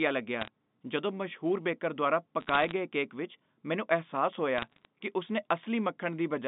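Telephone speech over a G.711 line, band-limited to roughly 150 Hz to 3.7 kHz, carries bit errors on a digital phone line in three bursts, at 0.41–0.48 s, 2.40–2.72 s and 4.58–4.85 s. Flipped bits corrupt single samples, producing sharp ticks and crackle laid over intact speech. That distinguishes it from packet loss, which leaves gaps or smeared fills. The density suggests an error rate around half a percent, a little lower in the last burst.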